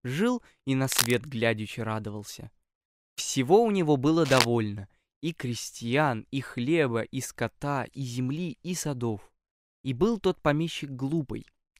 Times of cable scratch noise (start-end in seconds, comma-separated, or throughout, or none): 0.85-1.14, 4.25-4.45